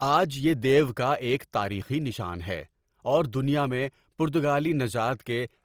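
Opus compression runs through the whole clip, from start to finish. The speech sounds grainy and rough rather than swirly, which points to the likely cause: Opus in its fullband music mode, where bands that run short of bits are rebuilt by folding lower bands or adding noise instead of being left empty. The damage is plainly audible, consistent with a rate around 24 kbps, and nothing is present above 20.4 kHz.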